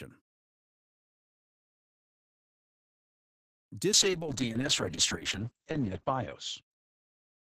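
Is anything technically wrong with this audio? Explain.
Yes. From 3.93 s to the end, there is a call bitrate drop. The encoder was forced to spend far fewer bits, which fits a fall from about 48 to 7 kbps. Coding turns coarse and rough, and the top end is cut off around 8 kHz.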